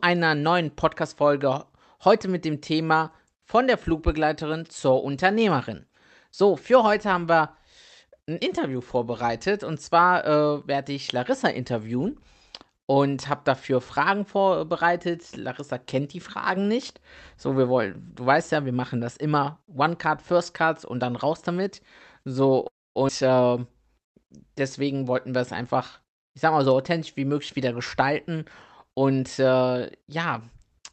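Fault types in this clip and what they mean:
call audio freeze: At 22.67 s the speech stops for about 0.3 s, mostly silent, then resumes where it left off; likely delayed packets emptying the jitter buffer.
skip ahead: Around 23.1 s playback jumps forward, losing roughly a fifth of a second of speech, as a stretch of audio is dropped.
jitter buffer speed-up: From 24.80 to 26.67 s, before "so authentisch wie möglich", speech runs 6% faster at unchanged pitch as short pitch periods are cut to shrink buffer delay.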